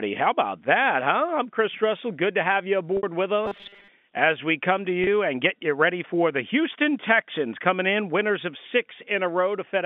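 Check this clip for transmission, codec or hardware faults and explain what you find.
Two kinds of fault affect the speech, heard through a narrow telephone band of roughly 200 Hz to 3.5 kHz.

Packet loss with pitch repetition: From 2.97 to 3.03 s, just after "to have you", the sound holds briefly on a slightly buzzy, sustained tone. At 5.04 to 5.07 s, between "as we come to" and "and get you ready", a shorter version of the same hold occurs. About 60 ms and then 30 ms of audio went missing, and the receiver bridged each gap by repeating the last pitch period.

Robotic sound from repeated short buffers: From 3.46 to 3.89 s, just before "as we come to", the speech becomes a rigid, metallic buzz near 200 Hz that still roughly tracks the words. The likely cause is the player looping a short stretch of audio, which fits a buffer of about 5 ms, while roughly half the real audio is skipped.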